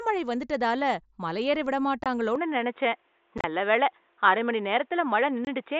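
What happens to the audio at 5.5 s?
Between 5.45 and 5.47 s, voice packets travelling between the Bluetooth headset and the phone were lost and nothing was put in their place. For 22.5 ms, which fits about three lost mSBC frames, the speech simply stops and restarts with abrupt edges, leaving a short hole in the sound. This is unconcealed Bluetooth headset packet loss.

The same moment also falls inside a longer change that began at 2.36 s and runs to the end. The input was likely switched to a poorer device. Although the mSBC link carries audio up to 8 kHz, nothing above 3.8 kHz comes through from that point on. The sound is duller and boxier, with a new background noise about 45 dB below the speech. The level stays roughly the same, and there is no silence at the switch.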